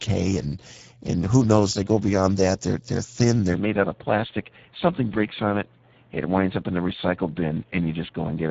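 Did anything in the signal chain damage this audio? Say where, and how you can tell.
Yes. The codec stage damaged the whole clip with Speex codec coding. The speech sounds noisy and hoarse throughout, and nothing is present above 7.7 kHz. The plainly audible CELP coarseness fits a low bitrate near 10 kbps, which leaves too few bits to model the excitation cleanly.

From 3.54 s to the end, the band suddenly narrows to nothing above 3.8 kHz, and the sound turns duller. There is no gap and no real level jump, but a new noise floor appears roughly 35 dB under the signal. The likely cause is the input switched to a poorer device at the driver level.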